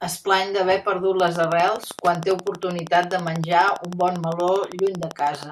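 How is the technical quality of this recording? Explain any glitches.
The recording is marred by one sustained fault, a train of clicks. From 1.2 s, just after "es plany d'haver perdut", until 5.44 s, the likely cause is interference or a faulty connection injecting a pulse at a steady 12.5 per second. Around fifty similar clicks, peaking about 10 dB above the speech, tick regularly over the talking and through the pauses.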